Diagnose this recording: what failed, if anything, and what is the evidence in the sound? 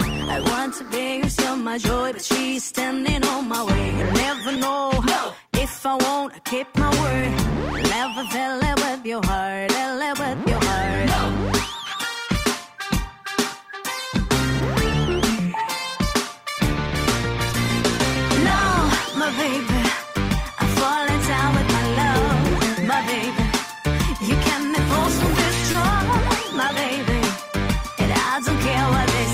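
Short concealed packet loss at 4.55, 7.20, 17.50, 21.77, 25.71–25.75 and 26.68 s, a network fault. Each gap, mostly about 10 ms and about 30 ms at 25.71 s, was bridged by the decoder extending the preceding sound before blending back, leaving brief smears or wobbles.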